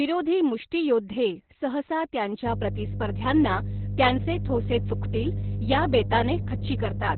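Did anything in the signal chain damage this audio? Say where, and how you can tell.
Yes. At the codec stage, heavy Opus voice compression throughout removes everything above 4.3 kHz. The speech comes out muffled, hoarse and slightly robotic, which fits SILK narrowband at around 8 kbps.

In the analogue wiring, a 50 Hz mains hum about as loud as the speech runs from 2.46 s to the end, pointing to a ground loop.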